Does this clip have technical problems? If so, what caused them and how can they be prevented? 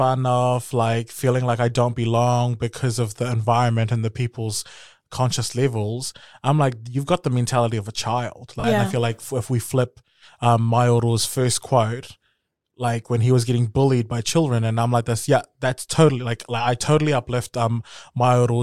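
Yes. Between 8.60 and 8.64 s, right after "mentality of a child" and before "yeah I feel like", lost LE Audio frames leave a 40 ms gap that fits four 10 ms frames. The LC3 decoder filled it by reusing the last spectrum with random signs, so the sound smears into noise instead of cutting to silence or stuttering as a repeated buffer would. Keeping the Bluetooth link strong and free of interference prevents this.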